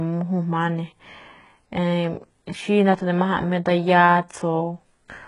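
HE-AAC compression runs through the whole recording and is heavy. The treble of this speech sounds synthetic: s sounds come out gritty and lispy, with a metallic sheen that doesn't match the lower harmonics, and nothing is present above about 11.1 kHz. This is likely spectral band replication, where only the lower band is coded and the upper band is rebuilt from copied lower content under a coarse envelope. The damage fits a very low bitrate around 12 kbps.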